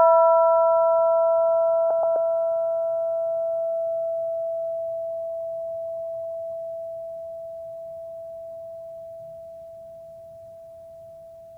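At 1.90 s the music turns briefly garbled, until 2.16 s. This is frames out of order. Two neighbouring blocks of audio, each about 128 ms long, were swapped before decoding. That fits runs of four frames each. The later block plays first, then the earlier one. The result is a short, tangled flutter in the music. Nothing is missing, and the music carries on at the right time.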